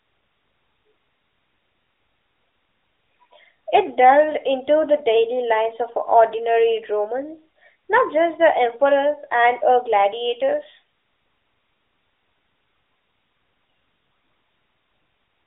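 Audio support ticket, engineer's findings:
No faults found in the clip. The AMR narrowband mobile codec path is audible as a phone-line band, with nothing above about 3.8 kHz and only light codec texture, which fits the 12.2 kbps AMR-NB mode.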